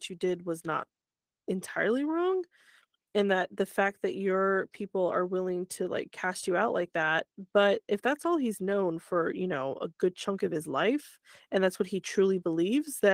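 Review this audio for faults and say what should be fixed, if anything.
No faults found in this speech clip, so nothing needs fixing.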